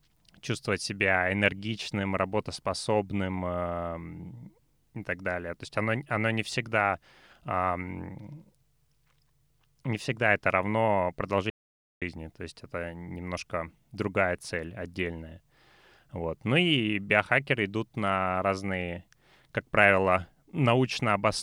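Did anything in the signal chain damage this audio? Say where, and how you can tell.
Yes. There's an audio dropout to silence from 11.50 to 12.02 s, right after "не всегда это равно" and before "то есть это немножко". For about half a second the speech drops to silence, with no room tone. That's likely a lost input link, with the recorder writing silence.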